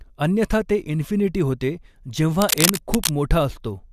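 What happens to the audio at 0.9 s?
Nothing goes wrong at 0.9 s; the speech runs through that moment intact, with no dropout, click or other fault.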